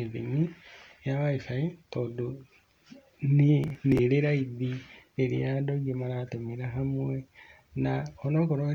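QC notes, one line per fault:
3.64–3.99 s, processor overload crackle: a burst of gritty, tearing crackle sits on the speech for about a third of a second. The processor kept missing the deadlines for its tiny audio buffers, and each missed buffer was skipped, leaving a dozen or more hard-edged jumps. Each skip fits buffers of around a millisecond and a half. The waveform shows small abrupt discontinuities, and the spectrogram shows a cluster of thin vertical broadband streaks across that span.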